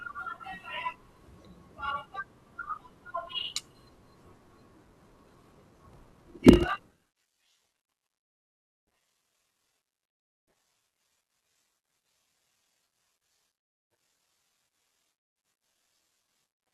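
From 4.74 s to the end, the speech takes on a steady buzz at about 41.7 Hz and slows to roughly 0.89 times its normal speed, while the timbre stays about where it was. This is a block size mismatch (padded). One stage writes 1024-sample blocks into a stage that reads longer ones, which fits a 1152-sample read. Each block's shortfall is zero-filled, so a short silent gap recurs at the block rate, producing the buzz and stretching the timing.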